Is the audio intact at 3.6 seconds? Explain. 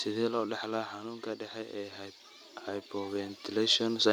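No. At 3.6 seconds the automatic gain is rising. From 1.53 to 4.08 s the gain control judges the input too quiet and slowly turns itself up by about 8 dB. The speech and the background noise swell louder together.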